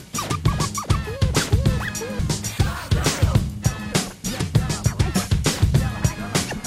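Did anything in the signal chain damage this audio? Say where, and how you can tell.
Yes, at the codec or storage stage. At 2.19 s the music breaks briefly, the sign of damaged data in a compressed stream: the decoder misreads corrupted frames and resyncs on the next header.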